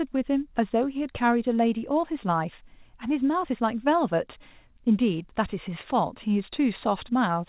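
Listening to the speech, nothing stood out as a technical fault.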